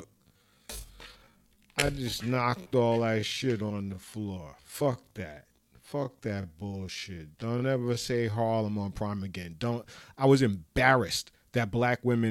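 From the start to 8.6 s the speech is a time-stretched section, running at about 0.57 times normal pace with unchanged pitch, sounding dragging and slowed. Likely cause: software repeating short slices. A spectrogram shows harmonics at normal spacing but drawn out.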